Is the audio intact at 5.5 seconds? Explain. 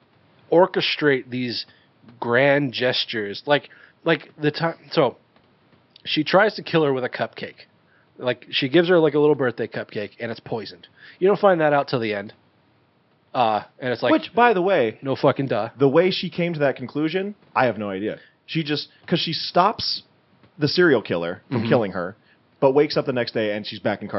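Yes, the audio is intact at 5.5 seconds, with only the room's own background noise sitting about 39 dB below the speech.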